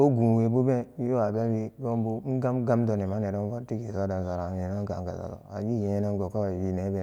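Nothing stood out as a technical problem on listening to this speech recording.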